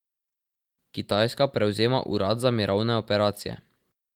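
Listening to the speech closely, nothing stood out as a technical fault at any point.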